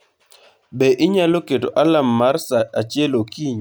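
No audible technical faults occur anywhere in this speech recording.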